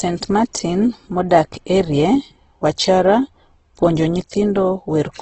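Right through the speech there's heavy Opus compression, likely at a very low rate, something like 12 kbps in its CELT music mode. Everything above 8.3 kHz is gone, and with too few bits the bands get filled in, so tones come out grainy, rough and noisy.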